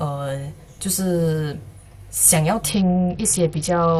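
A speech recording whose top end abruptly collapses at 2.69 s and stays degraded until the clip ends: a Bluetooth SBC bit pool drop. The treble turns dull and a gritty, granular noise rises across what remains, which fits the bit pool falling from 31 to 8, near 66 kbps. Starved upper sub-bands vanish while lower ones are coarsely quantised. That gritty texture separates it from a simple low-pass filter, which only dulls without adding noise.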